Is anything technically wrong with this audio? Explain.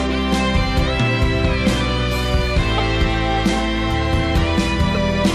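Yes. There are two brief glitches, both a corrupt frame decoded. The first runs from 2.78 to 2.80 s and the second from 4.95 to 4.97 s. Bits inside compressed frames were damaged, and the decoder played them anyway. Misread gains and codes put energy at the wrong frequencies. Each is a sharp chirp or noise blip. The first is loud, peaking around -5 dBFS, and points to a couple of frames. The second is quieter and sounds like a single frame.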